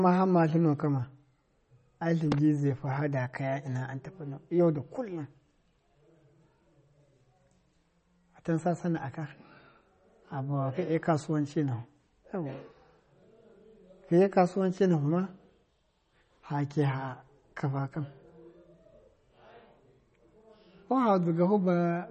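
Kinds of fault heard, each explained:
MP3 compression: nothing survives above 8.4 kHz, so the speech sounds dull, and a plainly audible watery swirl runs throughout as weak frequency lines blink in and out between frames. That points to a starved encoder, likely MP3 at around 32 kbps.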